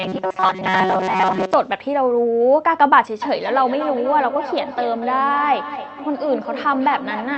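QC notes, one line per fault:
0.01–1.54 s, robotic sound from repeated short buffers: a rigid metallic buzz at 188 Hz, likely from the same roughly 5 ms chunk being replayed while most of the real audio is skipped.
3.22–7.37 s, feedback echo between two devices: the speech comes back about every fifth of a second, thinning and ringing, peaking at about 10 dB below the speech through the 8 kHz Opus band.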